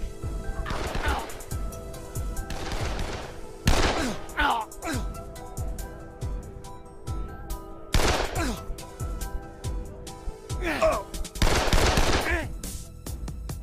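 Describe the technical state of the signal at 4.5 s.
At 4.5 s the signal is intact, with no dropout, clipping, glitch or other technical fault to be heard at that point.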